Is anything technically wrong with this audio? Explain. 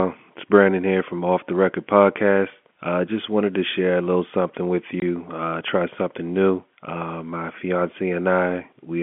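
Yes. Packet loss filled with silence at 5.00 to 5.02 s: a 20 ms hole, consistent with two 10 ms packets going missing and replaced by silence, gives the speech an abrupt gap with hard edges.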